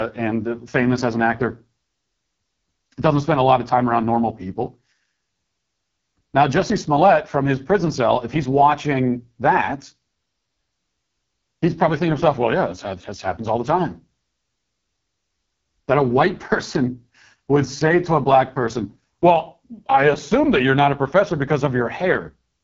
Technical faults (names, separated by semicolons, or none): AMR wideband (HD Voice) codec